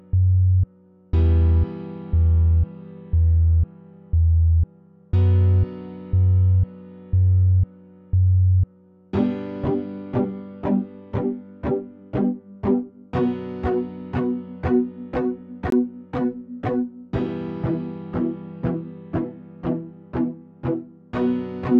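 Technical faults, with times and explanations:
15.70–15.72 s, block of digital silence: the audio drops out for about 21 ms and resumes abruptly, a short hole consistent with an unfilled 1024-sample output buffer.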